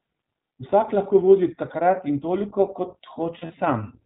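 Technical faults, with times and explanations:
Throughout: iLBC codec. The audio is narrowband, with nothing above 4 kHz, and has a rough, synthetic edge. The coder rebuilds each short frame's excitation on its own, which fits 20 ms frames at around 15.2 kbps, and the damage is plainly audible.
3.38 to 3.55 s: lost iLBC frames. About 100 ms of audio drops out in short gaps spread over 160 ms, the longest around 40 ms. The decoder fills each gap by repeating the last pitch cycle mixed with noise, so the holes sound like brief buzzy, held vowels. Clean sound returns almost at once because every frame decodes independently.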